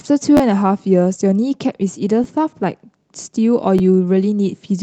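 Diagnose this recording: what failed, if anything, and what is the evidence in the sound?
Repeated buffer at 0.37 to 0.40 s, 2.24 s and 3.79 s, a fault at the driver or buffer stage. New audio failed to reach the output in time, so the device replayed its last block. Each repeat lasts about 11.6 ms, which fits a 512-sample buffer. At 0.37 s the block sounds twice more and skips roughly 20 ms of speech. The later two repeat once each, losing about 10 ms. Each is heard as a brief click-buzz with hard joins, over the call path's 8 kHz band limit.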